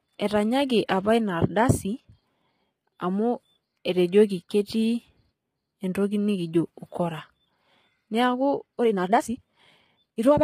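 Low-delay AAC compression throughout: the speech sounds rough and grainy, with noise between harmonics, likely from short-frame AAC-ELD coding at a low rate, consistent with about 24 kbps.

Time-stretched section from 8.76 s to 10.4 s: the pace jumps to about 1.77 times faster while pitch holds, likely from pieces being dropped, so it sounds rushed.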